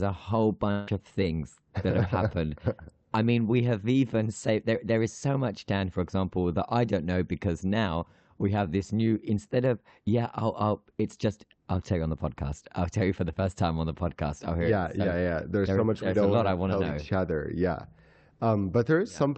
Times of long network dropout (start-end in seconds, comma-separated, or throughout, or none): 0.71-0.89